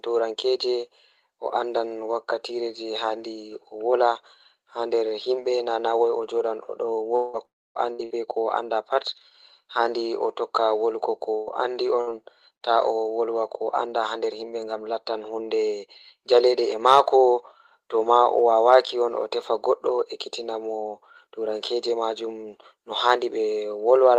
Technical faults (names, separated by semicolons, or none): long network dropout; burst of packet loss